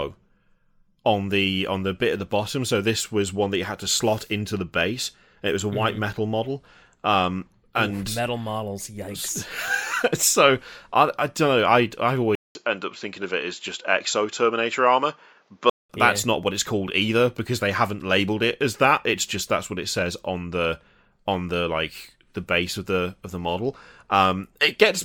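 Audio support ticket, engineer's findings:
Dull, band-limited speech 12.35–15.9 s, from "don't know I I" to "that's yeah not what": 0.2 s gap at onset, nothing above 7.6 kHz, faint new noise floor, no level jump. Likely input switched to a poorer, narrower-band device, then back.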